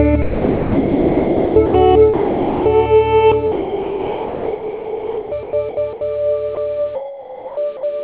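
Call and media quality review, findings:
Choppy stretches at 0.22–1.74 s, 3.52–6.01 s and 6.95–7.83 s: likely sound chopped by the voice detector, with sender VAD gating repeatedly and comfort noise filling gaps.

Sound gives way to steady noise or near silence at 2.14–2.66 s (0.52 s) and briefly at 6.55–6.57 s: likely sound dropped by the voice detector, with the sender stopping transmission and the receiver inserting comfort noise. Band stops at 4 kHz, consistent with G.711 A-law.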